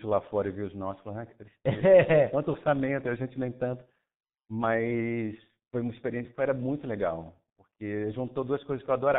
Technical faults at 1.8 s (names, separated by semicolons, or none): G.723.1 codec